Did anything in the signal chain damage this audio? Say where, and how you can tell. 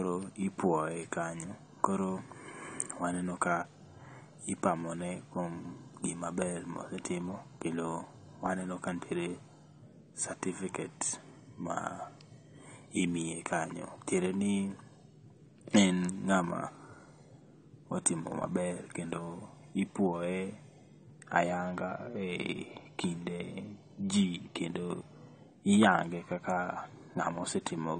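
Yes, and it's at the codec stage, right across the speech from start to finish. There's nothing above about 9 kHz, so the top end sounds dull, and the sibilants and held sounds have a smeared, warbly fizz to them. That's likely AAC compression: AAC-LC at a low rate drops its cut-off and starves bands it deems inaudible, which fits something around 32 kbps. The damage is plainly audible, not subtle.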